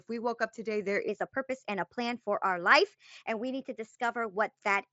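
Right after "woke up today there", at 1.09 s, the rest of the speech jumps into a section at the wrong speed, running 1.13 times fast and about two semitones higher, likely from playback on a mismatched clock. Through it you can still hear the mSBC headset band topping out near 7.7 kHz.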